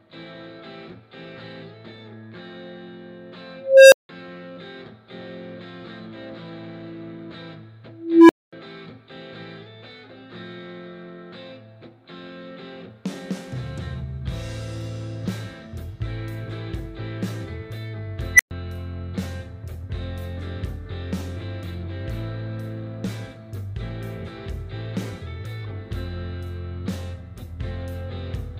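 An unstable filter fault occurs three times. At 3.57 s a tone of roughly 500 Hz swells over about 346 ms, then cuts to 171 ms of silence, ending at 4.09 s. At 7.95 s a tone near 300 Hz builds over 341 ms, followed by 235 ms of silence until 8.53 s. At 18.34 s a tone around 2 kHz rises within 52 ms, then drops out for 117 ms, ending at 18.51 s. Each time, a recursive filter with bad coefficients feeds its output back with too much gain, so it runs away into a loudening squeal, overflows, and falls silent until the filter resets.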